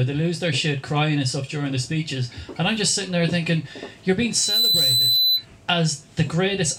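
The audio has a loudspeaker feedback squeal from 4.31 to 5.46 s: a steady 4 kHz tone swells over about a third of a second until it sits a few dB above everything else. A microphone is hearing its own speaker, and the loop gain tops one at that frequency.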